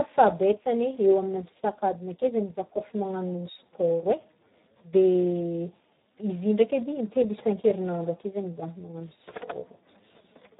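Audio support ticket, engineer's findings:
Speex codec, low-quality setting throughout, consistent with about 8 kbps. Too few bits for the CELP excitation, so speech comes out heavily damaged: noisy, hoarse, edging on robotic. Band cut at 3.9 kHz, nothing above, giving a dull, narrowband telephone tone.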